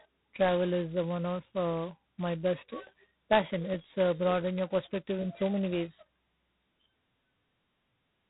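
All the way through, this has G.726 ADPCM damage: nothing above 3.9 kHz, and a harsh, rasping hiss riding the speech level, which fits 16 kbit/s coding.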